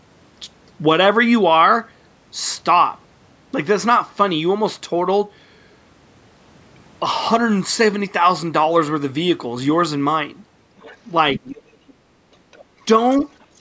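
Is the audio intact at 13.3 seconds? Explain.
No. From 13.12 s to the end at 13.61 s a faint second voice sits far beneath the speech, likely the far end's loudspeaker audio that the echo canceller left in the microphone signal: the other side's voice leaking through, a separate talker rather than room reverberation.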